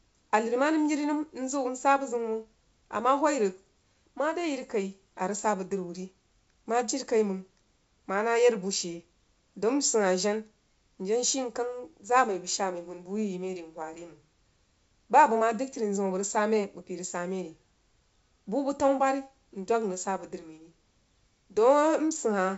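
No audible technical faults.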